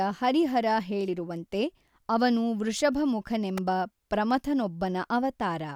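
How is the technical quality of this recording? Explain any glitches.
There is one glitch in the speech recording. At 3.58 s an electrical switching spike appears: a sharp snap, lasting only a few milliseconds and peaking at about -20 dBFS, sitting on top of the speech rather than replacing it. The likely cause is a nearby switch, relay, motor or static discharge arcing briefly and inducing a voltage pulse into the audio line. That near-instantaneous transient is what produces the dry, crisp tick.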